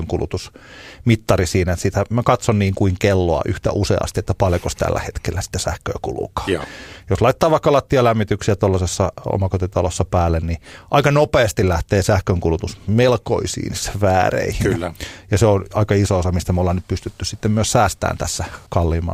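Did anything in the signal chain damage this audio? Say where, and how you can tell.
No, nothing in the signal chain damaged this audio.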